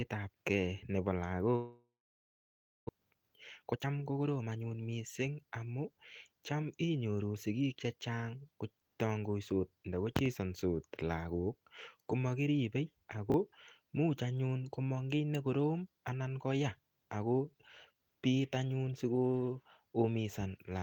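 From 1.55 s to 2.91 s the stream was most likely hit by a long network dropout: the link stopped delivering audio, and about a second of speech never arrived. The receiver stretched the last received sound into a fading buzz that soon gave way to near-silence, which lasts almost a full second of the gap. Speech then resumes further along, with the missing portion simply gone and the playout delay now roughly 0.3 s greater than before.

Straight after, from 2.98 s to 4.71 s, a jitter buffer speed-up follows. The receiver's buffer had piled up more audio than its target, so it trimmed short pitch-period-sized slices again and again to drain the backlog, cutting around 0.3 s in total. The speech plays at about 118 % of its normal rate while keeping the same pitch, so the delivery sounds rushed, as if the talker suddenly hurried.

At 13.30 to 13.34 s there are chunks out of order. One 20 ms block of audio was delivered one chunk late and played after the block that should have followed it. 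No audio is lost, but the two pieces are swapped, leaving three abrupt joins. The result is a brief garbled stutter in the speech.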